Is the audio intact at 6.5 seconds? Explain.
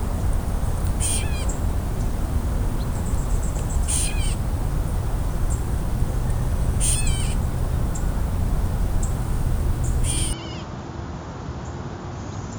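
Yes, at 6.5 seconds the audio plays through cleanly, with no dropout, click, distortion or other fault at that moment.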